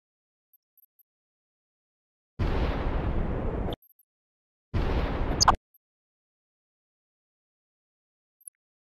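All the way through, the sound is dull, with a granular, gurgly edge and upper bands that flicker in and out. That's likely MP2 compression starved of bits, which fits a rate around 80 kbps, so whole top sub-bands get dropped and the rest are coarsely quantised.

On top of that there are three bursts of DAB burbling, at 3.68–4.04 s, 5.31–5.77 s and 8.41–8.55 s. Bit errors, under one percent in the first two and around one percent in the last, slipped past error correction, so you hear short blips of noise in single sub-bands.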